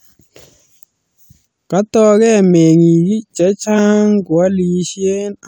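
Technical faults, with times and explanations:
3.77 s, compressed frames skipped: roughly 20 ms of the speech is missing, so the sound lurches forward by about that much, which fits lost compressed frames that were absent from the stream or rejected by the decoder as damaged. On a waveform the envelope shows a small discontinuity, and a spectrogram shows harmonics shifting abruptly.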